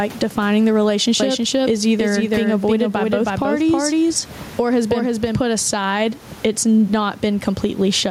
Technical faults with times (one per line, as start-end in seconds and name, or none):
0.00-8.11 gain pumping
1.20-5.40 doubled audio track